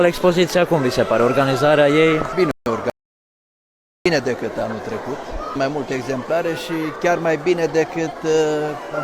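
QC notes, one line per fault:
2.51–2.66 s, rebuffering stall: playback freezes for 150 ms and then picks up exactly where it left off, so nothing is skipped but the timeline stretches by that amount. The player ran dry of downloaded audio and waited for more data before continuing. On the waveform it appears as a flat silent line with the signal on either side joining seamlessly, and on a spectrogram as a clean vertical blank band with no content missing across the join.
2.90–4.06 s, audio dropout to silence: the sound cuts off abruptly mid-flow and returns just as abruptly about 1.16 s later, with silence in between and no room tone at all. Whatever happened during that stretch is gone rather than delayed. The likely cause is a lost input, such as a disconnected device, a failed link or a momentary mute, while recording carried on writing silence. The waveform shows a hard-edged flat segment, and the spectrogram shows a fully black gap with sharp vertical edges.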